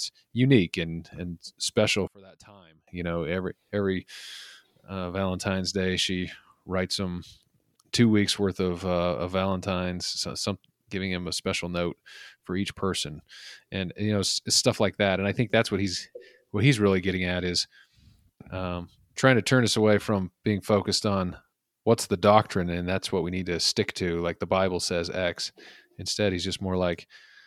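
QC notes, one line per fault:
2.07–2.87 s, one channel inverted: right after "unique and and special" the speech suddenly drops by about 25 dB and turns faint, as if it had been hollowed out, then comes back in full at "you know every every". The likely cause is one stereo side flipping polarity for that stretch, so the centred speech cancels itself when the channels are summed and only the small left-right difference gets through.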